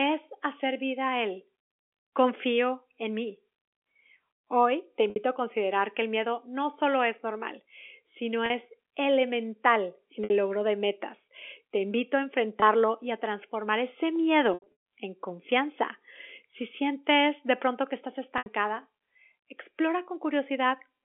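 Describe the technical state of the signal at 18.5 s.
Just before 18.5 s the sound briefly holds a buzzy, frozen tone that thins toward quiet before the signal picks up again with a soft cross-fade. This is packet loss with pitch repetition, from 18.38 to 18.46 s: about 80 ms of audio went missing, which fits a few 20 ms packets, and the receiver filled the hole by looping the last pitch period and fading it out. This all happens within the 300 Hz to 3.4 kHz band of the G.711 telephone coding.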